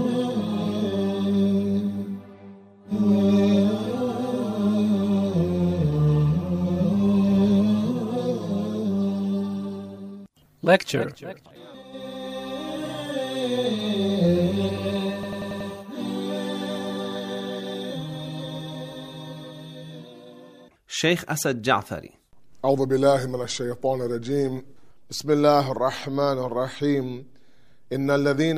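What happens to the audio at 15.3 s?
A rapid machine-gun stutter from 15.23 to 15.70 s: a system hang loop replays one 93 ms fragment five times, at 10.8 Hz, consistent with a 4096-sample ring buffer.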